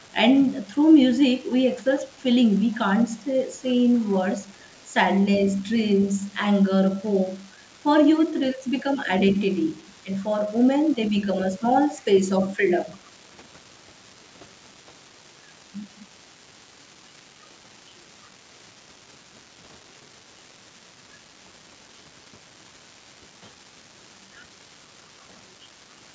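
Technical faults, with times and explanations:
Throughout: unreliable data bit. A marginal data line flips one bit at random, adding equal-sized spikes heard as a steady crackle, even in pauses. The waveform shows scattered uniform spikes, and the spectrogram shows broadband speckle.
0.0–0.12 s, 2.17–2.22 s, 2.72–2.78 s, 4.46–4.73 s, 11.95–12.05 s: echo leak. Brief, very faint delayed copies of the voice trail 296 ms behind, likely from an echo canceller letting loudspeaker pickup through. They appear as weak repeated speech traces far below the main speech.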